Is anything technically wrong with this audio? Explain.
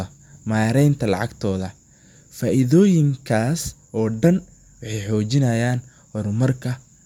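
No, nothing stood out as technically wrong on listening to this speech recording.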